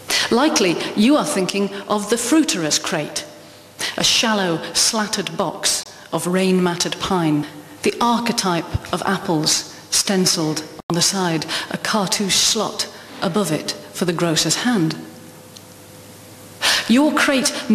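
Digital broadcast dropouts at 5.83–5.86 s and 10.80–10.90 s: the receiver muted on corrupt frames, leaving brief silent holes, consistent with one and four lost frames.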